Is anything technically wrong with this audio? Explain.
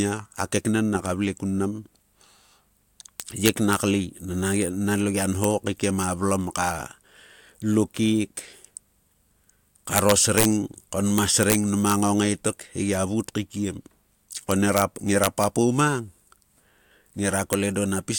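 Yes. The speech has integer overflow at eight points: 3.20 to 3.73 s, 5.44 s, 9.96 to 10.45 s, 11.18 to 11.55 s, 11.9 s, 14.51 to 14.82 s, 15.24 to 15.44 s, and 17.53 s. Loud peaks exceeded the integer range by up to about 5 dB. Instead of being held at the limit, they wrapped around to the opposite sign. Each overshooting sample jumps across the full scale. You hear violent cracks on loud syllables, far harsher than clipping.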